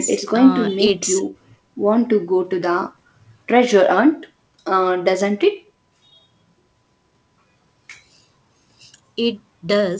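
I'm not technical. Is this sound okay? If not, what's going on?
No. Around 0.87 to 0.90 s there are bit errors on an ADPCM link: a few of the digital bits carrying this speech over the call connection were flipped. The decoder briefly loses track of the sound, producing a short pop with a rough burst.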